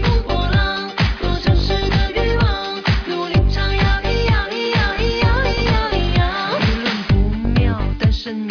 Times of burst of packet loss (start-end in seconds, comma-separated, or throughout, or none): none